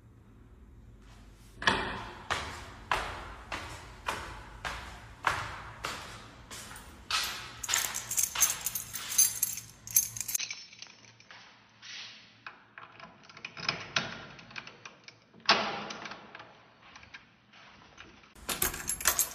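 At 10.36 s the everyday sound drops out for about 20 ms, then returns roughly 10 dB quieter, dull and boxy, with nothing above 6.1 kHz and a new noise floor some 40 dB down until 18.36 s. This is likely an input switched to a poorer device. A plain filter or codec change would narrow the band without also shifting the level and the background noise.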